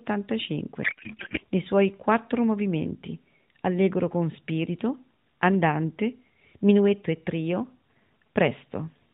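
A speech recording carried over AMR narrowband mobile coding, band-limited below 4 kHz with the light coding texture that fits the 12.2 kbps mode, suffers a codec payload misread from 0.84 to 1.39 s. There the speech collapses into garbled noise and warble that barely tracks it. The decoder is unpacking frame fields at the wrong bit positions, which points to octet-aligned AMR being parsed as bandwidth-efficient. Intelligible speech resumes once both ends agree on the packing.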